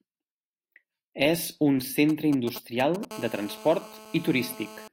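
A nearby 2G handset begins exchanging control traffic with its network at 2.09 s. It transmits only short clusters of radio bursts, and some part of the audio circuit rectifies them into the signal path. The result, lasting until 3.05 s, is GSM signalling bursts: a galloping dit-dit-dit of short buzzes pulsing at 217 Hz, at roughly 10 dB below the speech and unrelated to anything being said.

From 3.11 s the same phone settles into a call and transmits continuously in its burst pattern, 217 times a second. The circuitry keeps demodulating those radio pulses, so GSM phone buzz replaces the intermittent bursts and runs through to 4.88 s. It is a steady, raspy 217 Hz drone dense with harmonics, sitting about 18 dB under the speech. It is quieter than the earlier bursts but constant, and independent of the talker.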